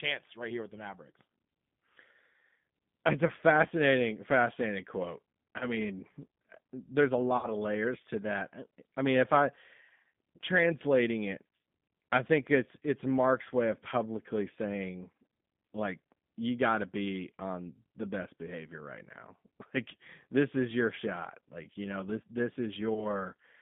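From start to finish the speech carries G.729 codec damage: nothing passes outside roughly 150 Hz to 3.6 kHz, and the low-rate excitation of pulses and pitch prediction leaves a rough, synthetic edge, which fits 8 kbit/s G.729A.

VoIP packet loss concealed by the speech codec appears at 3.27 to 3.32 s, at 5.59 to 5.74 s after "fascinating quote", at 7.37 to 7.50 s between "there's a" and "of layers to", and at 22.94 to 23.25 s after "you know this this". Each gap, about 20 ms or 60 ms at 7.37 s, is bridged by a fading extension of the last sound, and the speech stays weak or distorted for a while after the gap.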